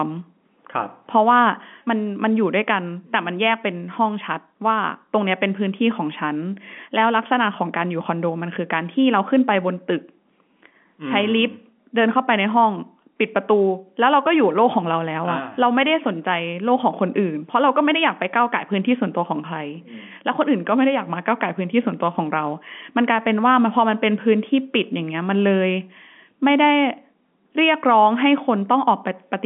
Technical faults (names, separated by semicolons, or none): none